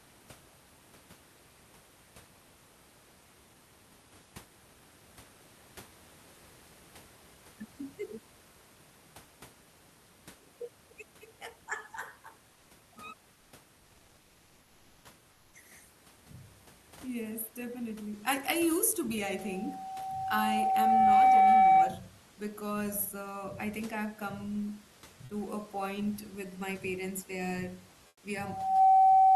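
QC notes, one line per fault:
15.31–15.53 s and 28.07–28.23 s, comfort noise in place of the background: for 220 ms and then 160 ms the room's detailed background turns into a flat, featureless hiss, about 3 dB and then about 10 dB quieter. This is likely discontinuous transmission: the sender paused during non-speech, and the receiver synthesised stand-in noise.
25.25–25.29 s, sound dropped by the voice detector: between "I think I've come" and "to a point with", about 30 ms of speech gives way to steady synthetic noise for 40 ms. The sender's voice detector likely mistook the speech for background and stopped sending until speech resumed.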